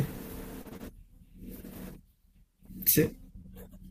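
Between 0.61 and 0.83 s the speech breaks up in a rapid cluster. Short concealed packet loss occurs at 0.61–0.67 s, covering about 40 ms of missing audio, then at 0.69–0.73 s and 0.77–0.81 s, about 20 ms each. The decoder extends the preceding sound across each hole and blends back in, leaving brief smears or wobbles.

Interleaved with these, at 0.65–0.67, 0.73–0.75 and 0.81–0.83 s, a lost packet is rebuilt from error correction. Each 20 ms stretch, consistent with one lost frame, is decoded from a low-bitrate redundant copy, so there is no gap but the sound turns rougher and noisier.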